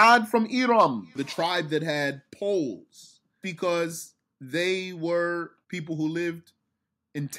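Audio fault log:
0.00–0.16 s and 0.79–0.84 s, microphone overload: the loudest syllables at the opening and again near 0.8 s take on a harsh, crackly, flattened edge. The likely cause is input volume set high enough that peaks pushed about 4 dB and then about 3 dB beyond the converter's ceiling. The waveform tops are sheared off on a few percent of samples, and the squared-off peaks add the gritty distortion.
0.15 s and 1.14 s, microphone volume stepped down: the whole signal, voice and background together, suddenly sits lower, by about 2 dB right after the opening distortion and then by a further 3 dB just after the second burst. This was likely the call software detecting the clipping and cutting the device's input gain in a single step each time, so the level falls abruptly rather than easing down.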